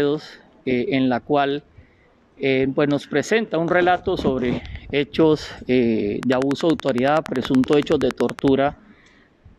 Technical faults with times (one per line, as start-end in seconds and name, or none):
6.23-8.49 train of clicks